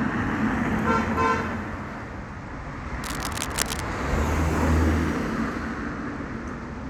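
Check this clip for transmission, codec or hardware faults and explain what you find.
One hardware fault: cable scratch noise from 3.04 to 3.80 s, a dense, uneven scratchy rustle, likely a worn connector's contact resistance fluctuating, unlike isolated clicks, sitting only slightly below the audio.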